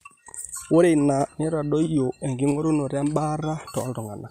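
Nothing goes wrong anywhere in this bit of speech, so there's no technical fault to point to.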